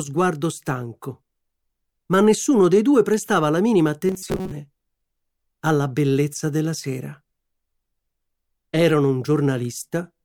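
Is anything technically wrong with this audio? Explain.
Yes. From 4.07 to 4.51 s the sound turns into a rigid metallic buzz at 188 Hz, likely robotic sound from repeated short buffers, with roughly 70% of the audio replaced by repeats of a chunk about 5 ms long.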